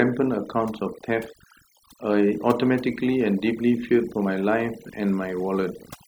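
Overdone noise removal runs through the whole speech clip. An aggressive noise reducer pushes bands near its noise estimate far down, taking quiet speech detail with them. The gaps sound near-silent with twinkling specks. A spectrogram shows scattered isolated dots between words and ragged, hollowed harmonics.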